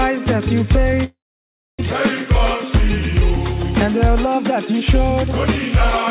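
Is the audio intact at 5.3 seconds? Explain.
Yes, the audio is intact at 5.3 seconds, with nothing there beyond the ordinary narrowband sound of the call path, which carries nothing above 4 kHz.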